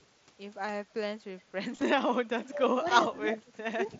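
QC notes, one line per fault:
1.76–1.82 s, concealed Bluetooth headset packet loss: a few brief dropouts over 60 ms, each patched by repeating recent waveform, so they are nearly hidden rather than silent gaps.
2.22–3.99 s, speech suppressed in double talk: level dips in pieces by up to about 30 dB over roughly 1.5 s. The likely cause is an echo canceller ducking during overlapping talk, unlike steady fading.
3.92–3.98 s, echo leak: a faint copy of earlier sound returns about 332 ms late, around 25 dB below the talker, likely from loudspeaker pickup not fully cancelled.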